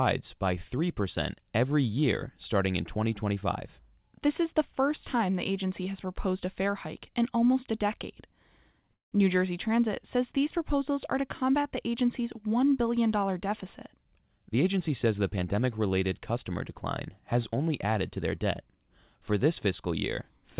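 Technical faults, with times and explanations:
8.94–9.14 s, call audio freeze: the sound stops for about 0.18 s. A brief fading tail gives way to roughly 0.14 s of silence, then the audio resumes where it left off with nothing skipped, likely because delayed packets emptied the jitter buffer. On the waveform a short decaying stub drops to a flat line. On the spectrogram a clean vertical gap crosses every band up to the 4 kHz limit of the G.711 call path.
13.29–15.54 s, jitter buffer speed-up: the speech runs about 7% fast at unchanged pitch and sounds hurried, ending just before "related customer decline has". The receiver shed around 150 ms of excess buffered delay by cutting out many short pieces of one or a few pitch periods in turn. On the spectrogram the harmonics stay at the same heights while syllables are squeezed closer together. On the waveform small splice points appear between cycles.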